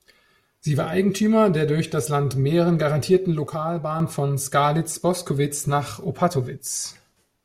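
From 3.47 to 4.00 s the speech abruptly falls about 6 dB, likely one channel dropping out; the waveform shows a sudden half-height step.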